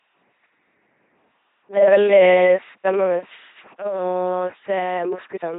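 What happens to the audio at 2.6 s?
At 2.6 s the speech is still under the LPC-10 vocoder artefact that runs through the whole clip. Each frame is rebuilt from a simple filter driven by either a pulse train or noise. The result is a heavily buzzing, mechanical robot voice. A spectrogram shows rigid pulse-comb harmonics alternating with noise blocks and nothing above 4 kHz, which fits a 2.4 kbit/s coder.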